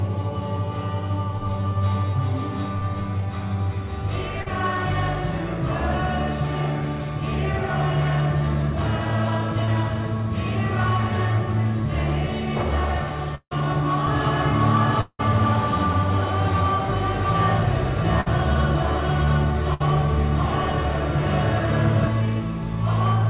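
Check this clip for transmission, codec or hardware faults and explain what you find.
Several transmission faults appear in this clip: two short concealed losses, two longer dropouts, two bursts of packet loss, and a doubled track across its second half. The band stops near 4 kHz throughout, which fits a narrowband call codec such as G.711.

Short concealed packet loss happens at 4.42–4.48 s and 9.64–9.69 s. About 40 ms failed to arrive, so the receiver extended the preceding sound to cover the gap and then rejoined the real signal. Each is a quick smear or wobble. They are too brief to fade, unlike the longer losses.

Long network dropout occurs at 13.35–13.53 s and 15.01–15.21 s, each lasting about 160–180 ms. The missing stretch was filled with a continuation of the last sound, which decays into roughly 40–50 ms of silence before the audio resumes further along, most likely after packets stopped arriving. 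The silent tail is what separates these from the bursts.

A doubled audio track runs from 14.07 to 22.08 s. A second, full-band copy trails the original by roughly 0.7 s at about the same level. It has no decay or room colour and starts and stops abruptly, which points to a duplicate capture or edit rather than an acoustic echo. Its likely cause is a second, slower path.

Bursts of packet loss hit at 18.21–18.28 s and 19.74–19.82 s, each losing about 60 ms. Concealment holds the last sound as a buzz or hiss that dims, then jumps ahead past the missing audio. These are longer than the short losses, but they never reach full silence.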